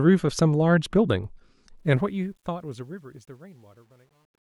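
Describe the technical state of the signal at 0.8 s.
At 0.8 s the signal is intact, with no audible fault at that moment.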